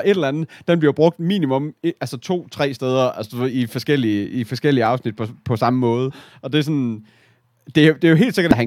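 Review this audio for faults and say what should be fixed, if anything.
A repeated buffer occurred at 4.86 s, between "i forskellige i forskellige" and "afsnit på på samme". New audio missed its deadline, so the device played its last block once more, which fits a 64-sample buffer of about 1.33 ms. The repeat is too short to stutter and comes through as a click or brief buzz. Larger output buffers or a higher-priority audio thread would keep the device supplied with fresh samples.

Damaged data in a compressed stream appears at 6.10 s, just after "på på samme måde", and again from 8.51 to 8.53 s. Corrupted bytes made the decoder misread frames and hunt for the next valid header, and each spot is heard as a brief chirp, squawk, click or short hole. Checksummed storage or transport, with a re-fetch of any bad segments, would stop corrupted frames reaching the decoder.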